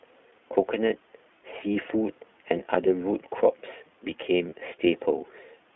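From the start, the speech is carried by the iLBC codec. The band runs only from about 250 Hz to 3.4 kHz, so nothing reaches the top of the spectrum. Each 20 ms frame is coded on its own, with no help from the frame before. The damage is plainly audible. Speech stays clear but sounds rough and slightly synthetic. The grain fits the 15.2 kbps mode of this narrowband VoIP codec.

At 4.50 to 4.54 s comes a lost iLBC frame. The gap points to a single 20 ms frame going missing. The decoder fills it by repeating the last pitch cycle, mixed with noise. It sounds like a brief held vowel, faintly buzzy. Because iLBC frames stand alone, the next frame decodes cleanly and the speech recovers almost at once.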